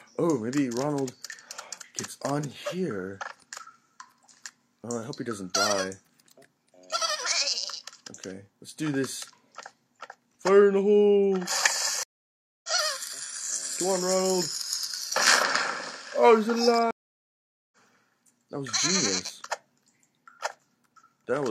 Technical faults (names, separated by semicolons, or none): stream reconnect